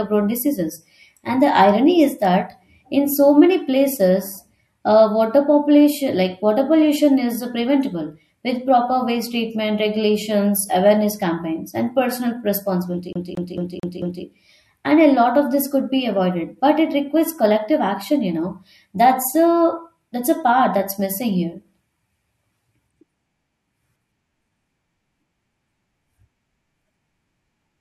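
From 13.13 s to 14.24 s the speech gets caught in a CD stuck on one turn. A scratch keeps knocking the laser back a track, so the same 0.22 s slice of audio plays five times in a row. A brief mute marks each jump back. The result is a fast, evenly spaced stutter at roughly four and a half repeats per second. Normal playback resumes once the pickup clears the damaged spot.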